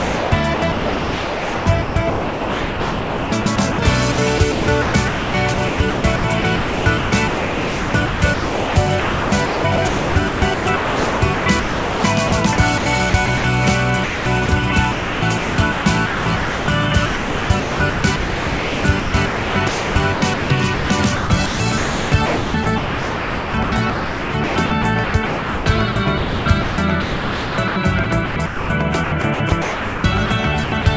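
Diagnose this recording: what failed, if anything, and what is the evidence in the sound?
Sound chopped by the voice detector, 0.00–13.44 s and 14.04–30.86 s: 7.9 s and 9.1 s become comfort noise, likely from call-processing gating toggling transmission.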